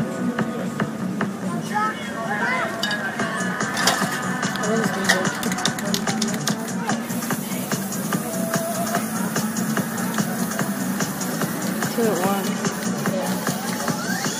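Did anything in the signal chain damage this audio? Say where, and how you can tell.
Yes. At the codec stage, compressed frames skipped: whole frames never decoded, so the audio jumps ahead by roughly 70 ms at 2.39 s and 50 ms at 14.00 s, fitting about three and two 23.2 ms frames.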